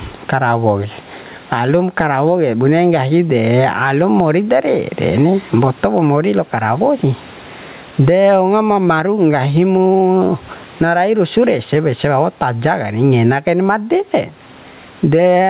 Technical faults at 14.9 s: gain pumping

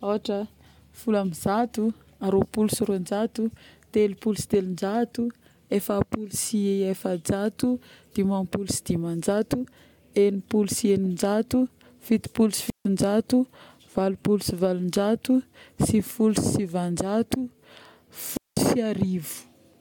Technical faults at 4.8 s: none

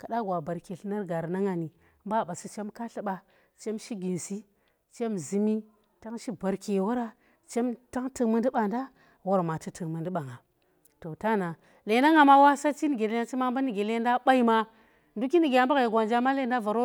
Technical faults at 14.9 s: none

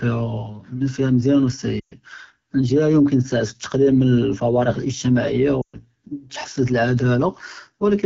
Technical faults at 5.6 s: AMR wideband (HD Voice) codec; lost AMR speech frames

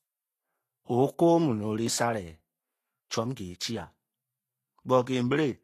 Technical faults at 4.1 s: Vorbis compression

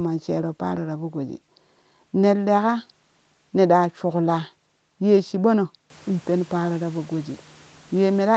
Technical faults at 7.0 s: none

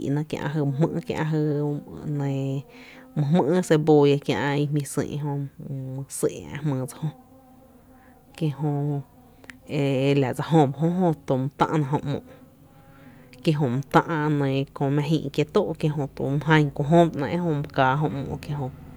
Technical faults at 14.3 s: none

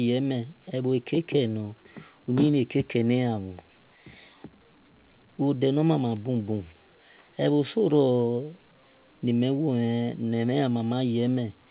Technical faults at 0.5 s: none

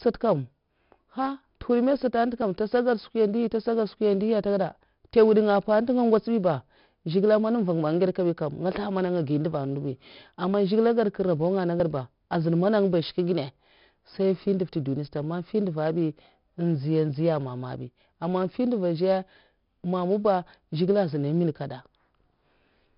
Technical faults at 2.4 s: 4-bit ADPCM compression; dropped buffer (overrun)

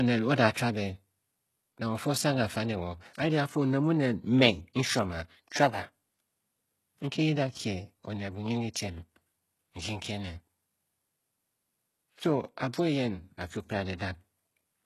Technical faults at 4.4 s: HE-AAC compression

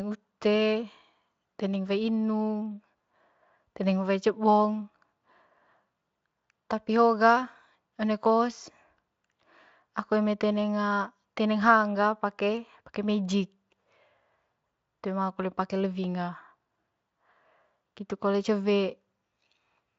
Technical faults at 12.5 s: none

